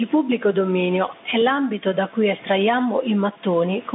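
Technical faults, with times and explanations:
Throughout, gain pumping: a fast limiter or compressor, likely reacting to microphone gain set far too high, pulls the level down by roughly 10 dB on every loud syllable. Loud and soft parts end up closer in level, leaving the speech flattened and squashed.
Throughout, Bluetooth CVSD headset codec: a one-bit delta modulator with an adaptive step, consistent with a 64 kbps CVSD link, cannot keep up with loud, bright sounds. Speech is confined to about 200 Hz to 3.6 kHz with nothing above 3.8 kHz, s sounds turn scratchy, and granular hiss sits underneath.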